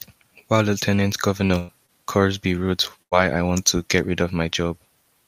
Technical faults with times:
1.47-1.54 short concealed packet loss
1.58-1.70 burst of packet loss
1.86-1.90 short concealed packet loss
3.02-3.13 burst of packet loss

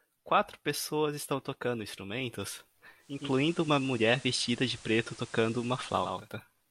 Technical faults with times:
2.97-6.33 digital radio blending to analogue

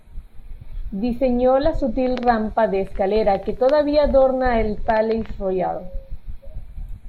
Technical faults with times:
0.00-7.08 channels drifting apart

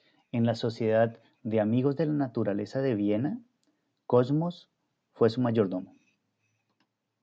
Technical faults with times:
none

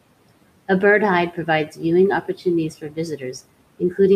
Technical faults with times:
1.67-1.80 speech cut by the noise suppressor
2.81-2.98 speech cut by the noise suppressor

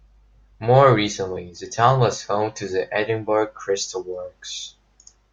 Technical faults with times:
none

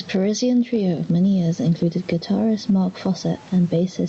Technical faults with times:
0.00-4.08 gain pumping

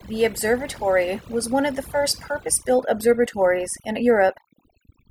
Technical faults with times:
0.00-5.10 overdone noise removal

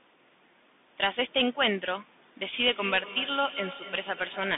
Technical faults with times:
0.00-4.58 Bluetooth CVSD headset codec
2.65-4.58 feedback echo between two devices

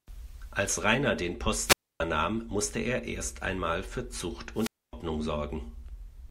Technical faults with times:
1.64-2.00 wireless microphone squelch dropout
4.54-4.93 wireless microphone squelch dropout

